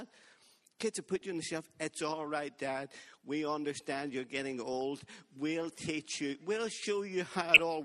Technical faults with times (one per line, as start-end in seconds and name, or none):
0.00-7.84 MP2 compression
1.16-1.24 DAB burbling
4.73 DAB burbling
7.54-7.59 DAB burbling